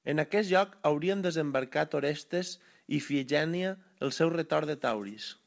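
No faults in this speech.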